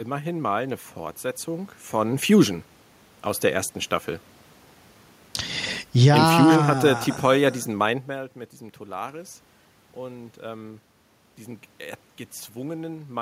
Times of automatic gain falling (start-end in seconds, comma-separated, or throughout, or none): 5.89-8.03